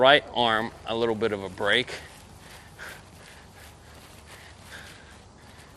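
Throughout, the sound is dull and gurgling with granular distortion and flickering top end, likely MP2 compression starved of bits, which fits about 80 kbps; unlike burbling, it never lets up. From 1.51 to 1.74 s comes DAB burbling: stray bit errors corrupt frames, so single sub-bands jump in short blips of noise rather than a steady dullness.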